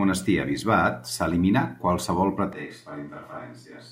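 At 2.53 s, after "s'eliminà qualsevol", the speech turns suddenly roomy and hollow. It drops about 10 dB, loses bass and gains room noise. This is likely a switch to a distant microphone.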